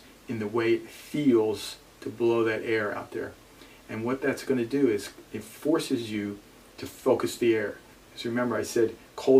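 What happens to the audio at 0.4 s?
Nothing goes wrong at 0.4 s; the audio carries on intact through that moment, with no dropout, click or distortion.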